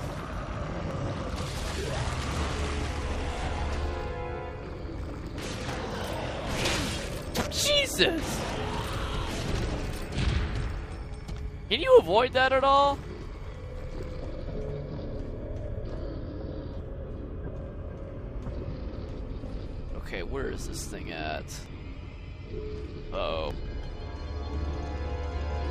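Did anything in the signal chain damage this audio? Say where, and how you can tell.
Yes. At 0.91, 13.01, 18.98, 21.66 and 23.51 s the audio skips forward with no gap, each time losing only a few milliseconds. The likely cause is a dropped buffer (overrun) at the driver stage: samples were overwritten before being read, and the remaining pieces were butted together.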